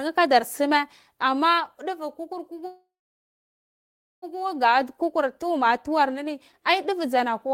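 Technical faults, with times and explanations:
2.67–4.24 s, call audio freeze: the speech halts, the last sound carries on briefly as a fading tail, and then about 1.34 s of silence follows before the speech picks up exactly where it stopped, with nothing lost. This is likely due to packets being delayed in transit until the jitter buffer ran empty. The receiver extended the final sound to cover the wait, inserting a 1.55 s gap and pushing everything after it later by that amount.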